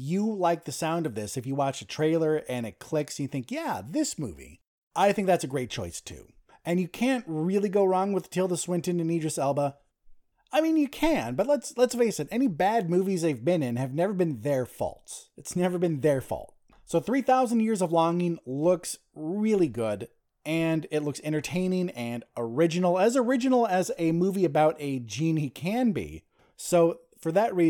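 A speech recording with no technical faults to report. Nothing in it needs flagging at any point.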